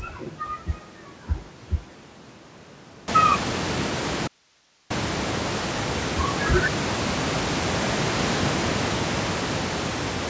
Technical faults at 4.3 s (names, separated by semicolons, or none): audio dropout to a faint residue